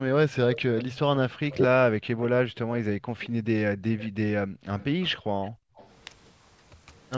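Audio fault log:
0.00–0.19 s and 1.39–1.73 s, speech suppressed in double talk: the speech sinks sharply, by roughly 40 dB at its deepest, for around 200 ms at the start and around 300 ms in the later stretch. Both ends of the call were likely talking at once, so the echo canceller could not tell this talker apart from the loudspeaker's echo and pulled everything down together.
0.52–2.26 s and 3.20–5.91 s, echo leak: a faint delayed copy trails the speech by 219 ms, at about 15 dB below the speech in the first span and about 20 dB below in the second, against the band-limited call audio, which has nothing above 8 kHz. This is likely one side's loudspeaker playing the call back into its microphone, with its echo canceller failing to remove all of it before sending it back.
2.01–3.46 s and 4.43–5.76 s, background gated by the echo canceller: the room sound drops away abruptly, by about 39 dB in the first span and about 40 dB in the second, totalling around 400 ms and 500 ms of near-silence before the ambience returns. 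The echo canceller clamped the microphone hard while the loudspeaker was active, then released it, so the background disappears and reappears instead of staying steady.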